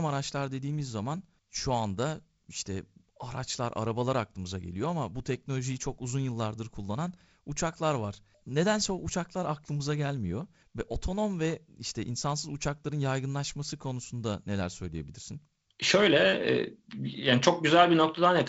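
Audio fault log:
Nothing stood out on listening; the speech comes across as wideband telephone audio, with no content above about 7.7 kHz and the light upper-band hiss and slightly noisier lower band that fit G.722 coding at 48 kbit/s.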